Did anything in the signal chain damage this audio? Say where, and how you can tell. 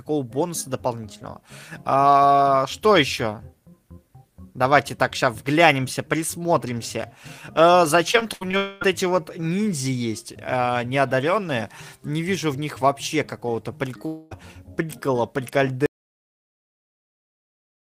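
Yes. From 8.11 to 8.55 s the sound turns choppy and robotic, with four short holes, the longest about 79 ms. This is repeated packet loss (robotic sound) on the network path: each missing packet was patched by stretching the previous sound, concealing roughly a third of that span.

At 8.57 to 8.83 s and again at 14.07 to 14.33 s, the sound smears into a fading buzz or hiss for about 240 ms, then resumes further on. This is likely a long network dropout, where the receiver extended the last audio to cover packets that never arrived.

At 15.86 s the audio cuts to silence, with no room tone, and stays there to the end. This points to an audio dropout to silence at the capture or recording stage, likely a lost input while the recorder kept writing silence.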